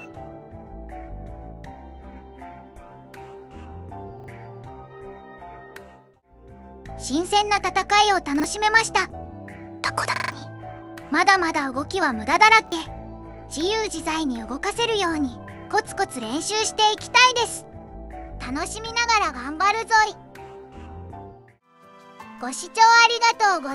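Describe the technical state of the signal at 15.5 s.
At 15.5 s the signal is intact, with no dropout, distortion, glitch or other audible fault at that point.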